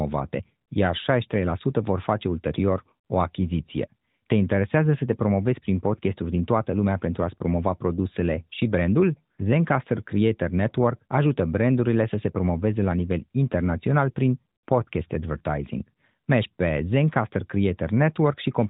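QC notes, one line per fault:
Nothing stood out on listening to the clip.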